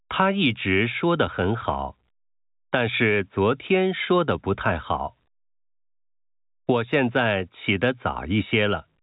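No technical faults can be heard in the speech. It carries the narrow band of G.711 telephone coding, with nothing above 4 kHz and at most a faint noise riding on the signal level, which fits the A-law variant at 64 kbps.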